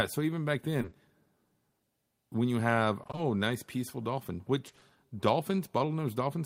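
From 0.81 to 0.93 s, three back-to-back short concealed packet losses, each about 20 ms, are bridged by extending the preceding sound, leaving a brief smeared wobble. At 3.03–3.19 s and 4.67–4.83 s, repeated packet loss patches roughly half of each stretch in short 20 ms pieces, giving a choppy, robotic texture.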